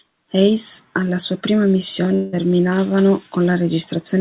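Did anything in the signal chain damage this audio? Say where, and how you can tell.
Yes, at the network stage. From 2.14 s to 2.37 s the sound gives way to a buzzy, fading continuation of its last moment. Then normal audio resumes, with part of it simply gone. This is most likely a long network dropout: for roughly 180 ms no audio arrived, so the receiver's concealment filled about 184 ms by extending what it last had. The signal is band-limited at 4 kHz throughout, which fits a G.711 call codec.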